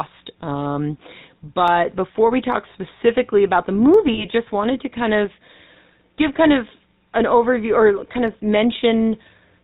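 The speech runs through the GSM full-rate codec for its whole length, at 13 kbps. The damage is plainly audible. Nothing above 4 kHz survives. The voice has a buzzy, gravelly roughness, because coarse pulse excitation replaces the real source.

Sharp single clicks land at 1.68, 2.52 and 3.94 seconds. Each is likely dropped samples. A tiny fraction of a millisecond vanishes, so the waveform jumps. No sound is lost. Only a thin click remains.

From 4.14 to 4.26 seconds come lost GSM frames. About 40 ms of data is missing, which points to two lost frames. The decoder repeats the last good frame. The result is a short, rough, metallic ring.

One more click, likely from dropped samples, arrives at 8.28 seconds.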